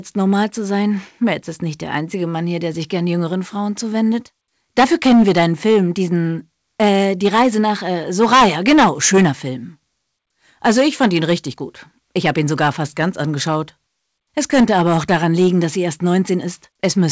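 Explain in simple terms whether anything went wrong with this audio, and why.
Something did go wrong: there's hard clipping from start to finish. The sound was pushed well past what one stage in the chain could handle, so the loudest peaks got sliced off flat instead of rounding over naturally. Only a few percent of the audio actually hits that ceiling, but those flattened tops throw off extra harsh overtones, so you hear a gritty crackle on the loud moments, all capped below about 8 kHz by the call line it went through.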